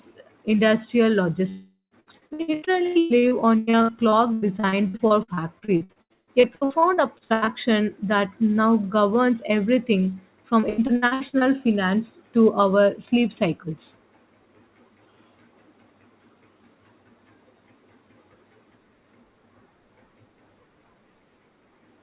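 At 1.49 s the speech breaks off. The last sound is stretched into a buzz that fades over about 0.4 s. Roughly a tenth of a second of silence follows. The speech returns at 1.94 s, with the lost part gone. The likely cause is a long network dropout, where no audio reached the receiver for that stretch.

Repeated packet loss, heard as robotic sound, begins right after, at 2.0 s, and runs to 7.50 s, ending before "that now governs everything". Gaps come in quick succession, the longest 144 ms. Each is patched by repeating the last sound. About a third of the stretch is patched this way, so the speech turns choppy, with pieces missing. It recurs from 10.60 to 11.44 s, between "that now governs everything" and "finance to". There are eight gaps, up to 89 ms. About 40 percent is patched. Throughout, nothing is heard above 4 kHz, which fits a narrowband call codec such as G.711.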